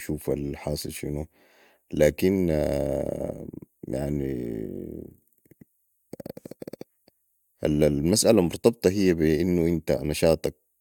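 Speech recording, no technical faults detected anywhere in the clip.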